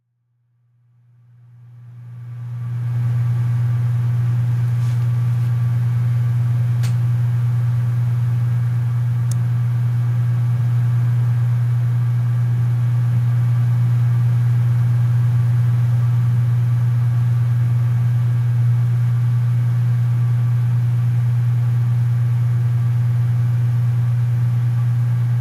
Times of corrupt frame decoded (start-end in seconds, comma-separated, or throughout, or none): none